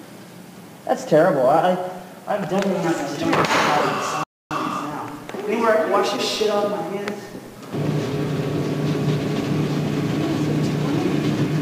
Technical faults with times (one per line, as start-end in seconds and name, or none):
4.23-4.51 playback stall